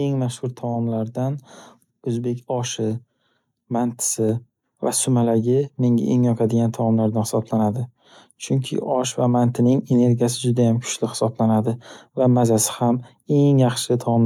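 Speech, with one microphone volume step-up at 2.91 s, right after "oʻzbek oshi". The capture software judged the input too quiet and raised the device gain in a single jump of about 2 dB, so voice and background noise rise together at once.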